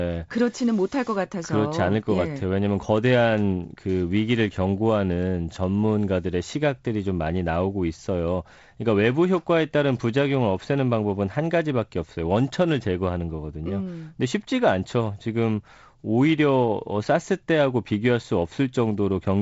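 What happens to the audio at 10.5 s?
At 10.5 s the speech carries on intact, with nothing beyond the light hiss and band limit near 7.7 kHz of the G.722 wideband telephone coding at 48 kbit/s.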